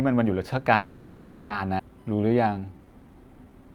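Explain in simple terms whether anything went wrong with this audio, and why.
From 0.75 to 1.52 s the speech stalls and the last sound is stretched into a fading buzz or hiss for about three quarters of a second. This is a call audio freeze, likely caused by packets held up in transit, emptying the jitter buffer. The speech then resumes where it stopped, with nothing lost.

At about 1.78 to 1.81 s there is a skip ahead: the speech suddenly jumps forward with almost no pause, and roughly half a second is cut out. The two sides of the missing stretch are butted almost directly together.

From 2.04 s to the end the speech plays at about 87% speed, drawn out but at the same pitch. This is a jitter buffer slow-down: the receiver repeated tiny slices of sound, adding about 232 ms, to rebuild its reserve.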